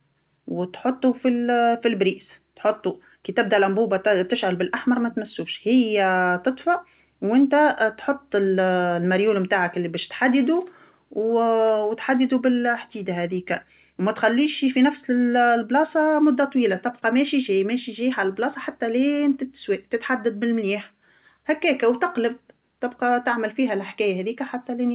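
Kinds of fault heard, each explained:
No faults found; the speech carries nothing above 4 kHz, consistent with a G.711 A-law call path working as intended.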